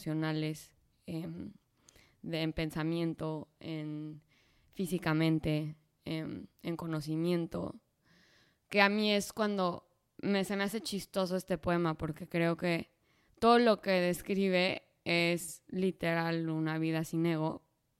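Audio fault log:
No fault is found in this speech clip.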